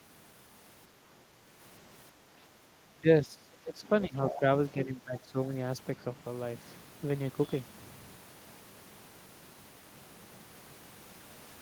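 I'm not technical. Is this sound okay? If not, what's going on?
No. Between 2.15 and 2.6 s, the room's background sound briefly dips for a fraction of a second. This is background gated by the echo canceller: only the surrounding sound drops, not the talker.

From 2.88 to 5.38 s, the talker's own voice dips and breaks up in pieces, about a second and a half in total. This is speech suppressed in double talk, likely from both sides talking at once.

Around 4.01 to 4.4 s, a second, fainter voice comes through underneath. This is the other side's voice leaking through, likely from a loudspeaker the echo canceller didn't fully remove.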